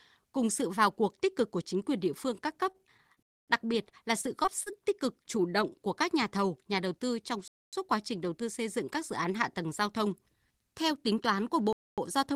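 From 2.71 to 4.80 s, right after "địa phương các cấp" and before "tích cực chủ động", the speech suffers repeated packet loss, with a robotic sound. Ten short holes, the longest about 31 ms, are patched by stretching the preceding sound, so it turns choppy. A spectrogram shows smeared, repeated frames where detail drops out. Inside that stretch, from 3.23 to 3.48 s, sits the first gap between chunks. The audio arrives in 4-second chunks, and each join leaves 250 ms of dead silence. The others fall at 7.48 to 7.73 s, just before "quá trình đầu tư", and at 11.73 to 11.98 s, after "tính toán của". On a waveform these are flat, hard-edged blanks at a regular 4.25-second spacing.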